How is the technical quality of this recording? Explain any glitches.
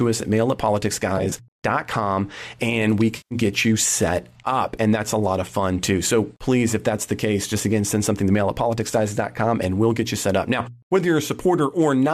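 Two short glitches from AAC frame loss with concealment mar the recording, at 1.18 to 1.33 s and at 3.17 to 3.35 s. Beneath them is a light grainy texture, likely from low-delay AAC compression at a moderate bitrate.

At 1.18 to 1.33 s, about 60 ms of audio is missing across a 140 ms stretch, in gaps of roughly 20 ms or less. The decoder patches each gap from the last good spectrum, leaving brief smeared, noisy flickers. Because the gaps are patched rather than silent, this is not a hard dropout.

At 3.17 to 3.35 s, a solid 140 ms run of frames is lost, which fits roughly fourteen 10 ms frames. The concealment repeats the previous spectrum with scrambled phase, so the sound turns phasey and hollow and starts to thin before recovering. The smear and fade set it apart from a clean gap.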